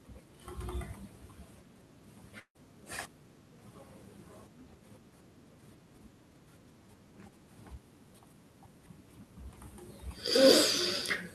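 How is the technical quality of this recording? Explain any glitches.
The recording has one glitch, from 2.39 to 2.57 s: a long network dropout, likely caused by a run of audio packets that never reached the receiver. About 160 ms of speech is lost. The receiver stretches the last sound into a fading buzz or hiss for roughly 150 ms, then leaves about 70 ms of near-silence before speech resumes with the lost part simply missing. That fading, smeared tail followed by a hole sets it apart from a clean edit cut or a brief click-like dropout.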